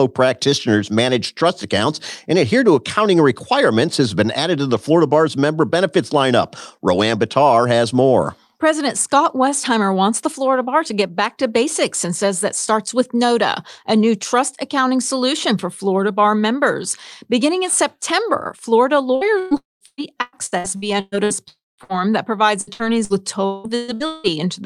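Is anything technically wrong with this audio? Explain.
Yes, the speech suffers from network packet loss in the last third of the clip, in three forms.

Repeated packet loss (robotic sound) runs from 19.15 to 21.33 s and again from 22.61 to 24.27 s, starting just after "that provides". The first stretch has 10 gaps, longest 120 ms, with about 35% of the span patched. The second has 7 gaps, longest 180 ms, with 43% patched. Each gap is bridged by extending the previous sound, so the speech turns choppy and robotic.

Two long network dropouts are likely behind the fuller breaks at 19.57 to 19.84 s and at 21.48 to 21.81 s, the second just before "that provides". In each, the last sound carries on briefly as a decaying buzz or hiss, then gives way to silence lasting about 180 ms and 210 ms respectively. The speech resumes with roughly 240 ms and 300 ms of content gone.

A burst of packet loss follows at 21.84 to 21.92 s, directly before "that provides". 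About 60 ms of audio failed to arrive in time for playback. The receiver held the preceding sound and faded it down across the gap, producing a short held buzz or fading hiss before the speech picks up again with that fragment missing.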